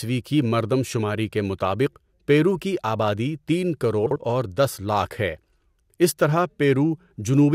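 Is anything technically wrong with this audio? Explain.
Yes. From 4.06 to 4.16 s, between "پیرو کی آبادی تین" and "اور دس لاکھ", the speech has frames out of order. Two adjacent blocks of about 48 ms each were swapped and decoded in that order, which fits runs of two frames each, so the stretch plays with its halves exchanged. It sounds like a brief garbled flutter. The overall timing is unchanged, because nothing is lost.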